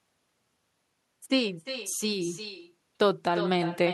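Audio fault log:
throughout, echo with no canceller: the far end plays the call over a loudspeaker and its microphone picks that sound up again with nothing removing it, so every phrase returns roughly 400 ms later as a thinner copy about 11 dB below the original.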